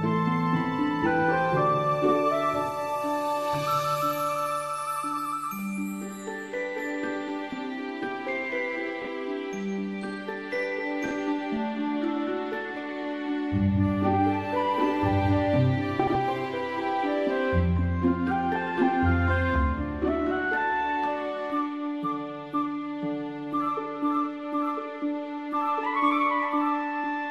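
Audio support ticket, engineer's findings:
Frames out of order: adjacent frame runs swapped before decoding at 9.02–9.07 s, 11.06–11.11 s (about 26 ms halves) and 15.99–16.15 s (about 78 ms halves). Exchanged segments give brief garbled flutter, no time lost.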